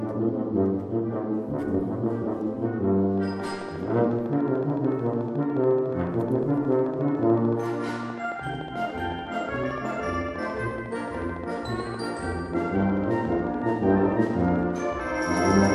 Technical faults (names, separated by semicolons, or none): train of clicks